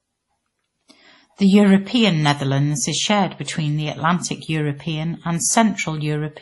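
From start to finish the speech sounds dull. Nothing is heard above 11.5 kHz, and two layers of coding damage sit together. The cause is likely transcoding between lossy codecs. The sound fits a low-rate MP3 near 32 kbit/s that was re-encoded as WMA at about 64 kbit/s. The WMA stage spent its bits copying the MP3's flaws and added its own, so neither the lost detail nor the low cut-off was recovered.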